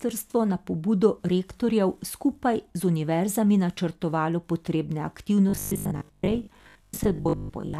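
Speech clip with robotic sound from repeated short buffers starting at 5.49 s, right after "univerzami načrtovalo potrebne", and running to the end at 7.79 s. The voice collapses into a rigid, metallic buzz at 50 Hz that only loosely tracks the speech. That pitch implies a repeated segment of 20 ms, with roughly half of the audio being repeated material. The likely cause is late-arriving audio, with the player filling gaps by looping the last buffer.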